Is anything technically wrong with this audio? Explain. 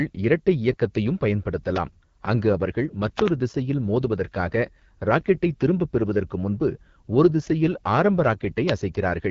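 Yes. Throughout the speech, the AMR wideband (HD Voice) codec leaves plainly audible damage. Its vocal tract model, starved of bits at a rate pointing to 8.85 kbit/s, makes voicing rough and raspy, while nothing sounds above 7.2 kHz. That wideband reach, not a 3.4 kHz narrowband ceiling, separates it from ordinary telephone coding.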